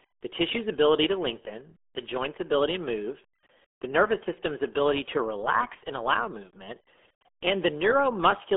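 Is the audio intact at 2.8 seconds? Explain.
No, 2.8 seconds sits inside damage that runs through the whole speech clip: the RealAudio 14.4 codec sound. Everything lives in a narrow phone-like band of roughly 300 Hz to 3.4 kHz, with nothing at all above 3.7 kHz. The speech comes out muffled and gargly, with that heavy, smeared quality you get when a codec throws away most of the detail, which fits the 8 kbit/s RealAudio 1 squeeze built for dial-up modems.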